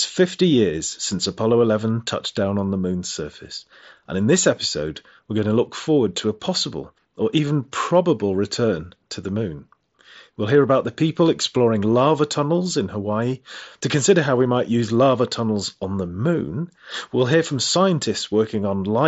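Nothing goes wrong anywhere in this speech recording, which arrives over a Bluetooth mSBC headset link, so the sound simply tops out around 7.7 kHz, as that codec normally does.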